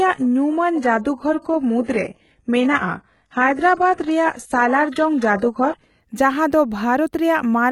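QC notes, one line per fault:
0.0–6.0 s, adaptive stream starting at a low bitrate: dull speech with nothing above 11.5 kHz and heavier codec artefacts, then a sudden, gapless lift in clarity, fitting a stream stepping up from about 12 to 96 kbit/s.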